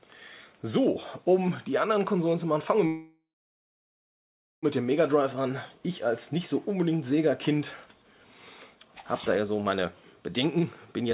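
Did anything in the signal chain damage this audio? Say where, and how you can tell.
Yes. A call audio freeze at 2.87 to 4.66 s trails off into about 1.4 s of silence. Late packets likely drained the jitter buffer. Playback then resumes where it stopped.

A jitter buffer speed-up runs from 10.45 s to the end. The sound hurries to 114% at unchanged pitch, as short pitch periods are cut, about a tenth of a second in total.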